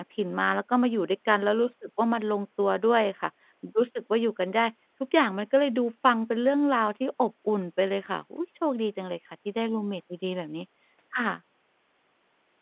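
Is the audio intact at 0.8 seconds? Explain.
Yes, the speech at 0.8 seconds is intact, with nothing there but the narrow, telephone-band sound of ordinary G.711 mu-law coding at 8 kHz.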